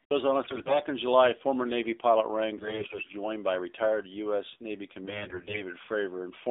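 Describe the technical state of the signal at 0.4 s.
At 0.4 s the audio carries AMR narrowband mobile codec damage, present through the whole clip. Everything above about 3.7 kHz and below 300 Hz is gone, and the voice has a plainly buzzy, synthetic edge, consistent with a low mode around 7.4 kbps, where a few pulses per subframe drive a vocal-tract model. Unlike plain band-limiting from a telephone filter, the coarseness lies in the resynthesised voice itself, not just the missing top end.

Just after, from 0.44 to 0.79 s, AMR bit errors take over. A sizeable share of the weakly protected bits arrives flipped, which fits around 14 damaged frames, while the checks on the core bits still pass. The excitation pulses land in the wrong places and the finer gain and spectral values drift, so the voice keeps roughly its pitch and level but turns hoarse, scratchy and gargly. That separates it from frame loss, which would bring muting or smeared concealment rather than continuous, rough-sounding speech.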